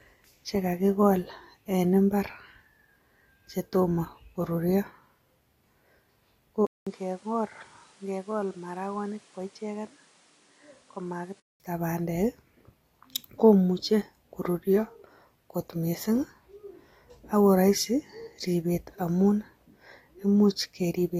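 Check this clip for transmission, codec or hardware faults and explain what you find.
One fault stands out. From 6.67 s to 11.6 s the speech turns duller, drops by around 10 dB and sits on a new noise floor roughly 30 dB below the signal, with a 200 ms silence where it starts. The likely cause is the input switching to a poorer device. That second input passes nothing above 11.4 kHz and brings its own level and background noise, so the tone changes abruptly for those five seconds.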